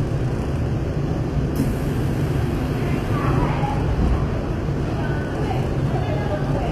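HE-AAC compression runs through the whole of this everyday-sound recording. The top of the spectrum is bright but synthetic, with hissy and transient detail turning gritty and metallic. That is the signature of spectral band replication: the encoder codes only the lower bands and rebuilds the treble by copying them upward under a coarse envelope, so harmonics no longer align above the crossover. The damage is plainly audible, and nothing sounds above 14.9 kHz. The likely cause is a low-bitrate HE-AAC encode, around 24 kbps.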